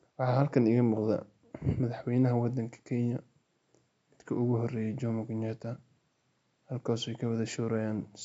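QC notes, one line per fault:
No faults are heard anywhere in the speech. A faint room noise sits about 48 dB below the voice, part of the recording space rather than the system.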